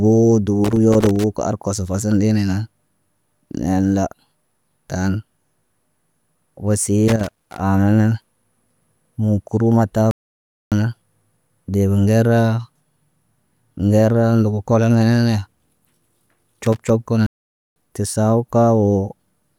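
At 0.64 to 1.24 s, just before "ka arkos", a burst of loose connector crackle breaks through: irregular scratching and small pops as a worn contact makes and breaks, chopping the signal and letting DC spikes through. It returns at 7.08 to 7.60 s, ahead of "aana nan", and briefly at 16.65 to 16.90 s. Unlike a dropout, the speech is not cleanly removed but roughened and spattered with clicks. At 10.11 s the audio simply stops for about 0.61 s, then resumes at 10.72 s. Another gap runs from 17.26 to 17.76 s, about 0.50 s. This is a playback stall, likely caused by the player running short of data or having its thread blocked. What separates it from the crackle is the clean, total silence with no added noise before the sound carries on.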